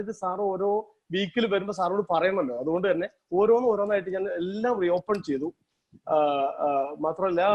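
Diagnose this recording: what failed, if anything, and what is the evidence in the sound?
Nothing failed at any stage, as no dropout, click, distortion or other defect can be heard anywhere in the recording.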